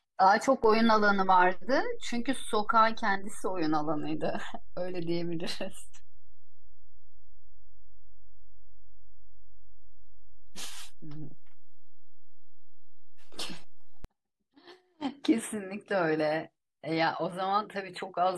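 Speech, with a DC step in it: at 0.64 s the waveform's zero line jumps by about -30 dBFS, and you hear that as a low thump or click. The offset holds until 14.05 s, where it drops back with a second thump. That kind of sudden shift and return points to a converter recalibrating or an input carrying an offset being switched in and out. The speech itself carries straight through both jumps.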